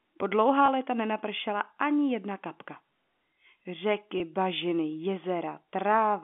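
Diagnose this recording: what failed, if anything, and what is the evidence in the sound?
Twice the speech briefly holds with a slightly buzzy, frozen quality, from 0.66 to 0.68 s and again from 4.18 to 4.20 s, each gap about 20 ms long. This is packet loss with pitch repetition at the network stage. The missing audio, which fits a single 20 ms packet each time, was concealed by repeating the last pitch period. The gaps are too short to fade to silence. The G.711 telephone coding keeps the 200 to 3400 Hz line band.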